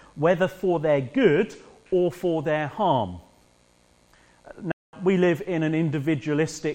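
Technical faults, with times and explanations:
4.72–4.93 s, playback stall: the sound stops abruptly mid-flow and the output is silent for about 212 ms before the audio picks up again. A gap like this, with nothing leaking through, is likely the player running out of buffered data or having its output thread held up, so no samples reached the device until it caught up and resumed feeding the stream.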